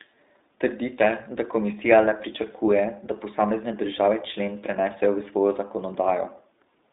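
Throughout the speech, the iLBC codec limits everything to a telephone band of roughly 250 Hz to 3.7 kHz, with nothing above 3.8 kHz. Each 20 ms frame's excitation is coded independently, giving a plainly rough, synthetic edge that fits about 15.2 kbps. A plain low-pass filter would dull the sound without that grain.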